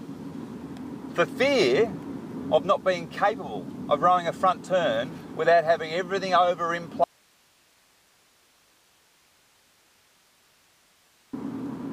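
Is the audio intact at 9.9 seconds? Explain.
No. At 9.9 seconds the audio is in the middle of an audio dropout to a faint residue running from 7.04 to 11.33 s, about 4.3 s long. The signal cuts off abruptly and only hiss remains, roughly 35 dB below the normal level. The likely cause is a signal path that stayed live after the wanted source was lost. The waveform collapses to a thin noise band, and the spectrogram shows uniform broadband speckle with no structure.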